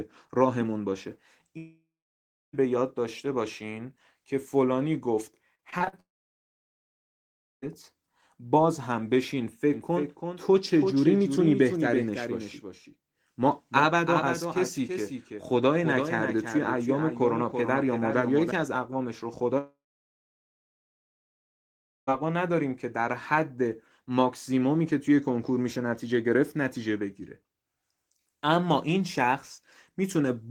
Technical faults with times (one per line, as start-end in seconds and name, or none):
1.57-2.55 long network dropout
5.55-5.94 repeated packet loss (robotic sound)
6.00-7.64 long network dropout
9.74-18.52 doubled audio track
19.58-22.10 long network dropout